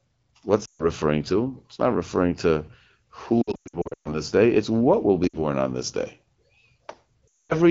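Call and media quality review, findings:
Lost AMR speech frames: speech drops to near silence within two frames before returning weak and rough. At 0.65–0.90 s; 3.41–4.18 s, repeated brief dropouts (longest run about 120 ms) before "day it's what will"; 5.28–5.37 s, a short dip between "it's what will be" and "on this day"; 7.28–7.55 s. Radio-corrupted frames fail checksum. The AMR-WB decoder repeats the last good pitch and vocal tract settings at decaying gain. Clear wideband speech between the gaps fits roughly 12.65 kbit/s.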